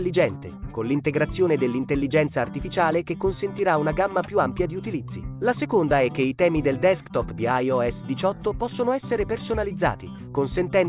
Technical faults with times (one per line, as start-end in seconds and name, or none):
none